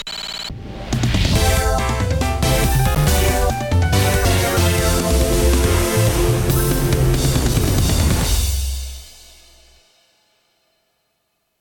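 At 2.92 to 3.26 s and again at 7.32 to 7.65 s, loose connector crackle breaks out: an intermittent contact chops the signal into irregular scratchy bursts. The waveform shows ragged dropouts and sharp spikes, and the spectrogram shows scattered broadband vertical streaks.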